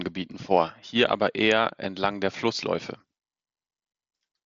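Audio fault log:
No faults heard in this Bluetooth headset speech.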